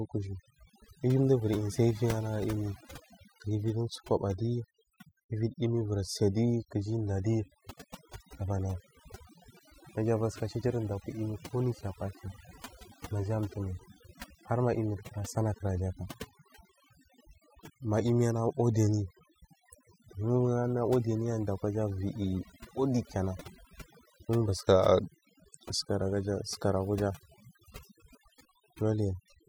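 From start to finish, the speech carries overdone noise removal. A noise reduction stage was pushed far too hard on a noisy recording. Whenever a frequency band sat close to its estimate of the noise, it cut that band deep or shut it off. Quiet detail in the voice fell below that line and was cut along with the noise. The background in the gaps between phrases drops and breaks up into small twinkling specks.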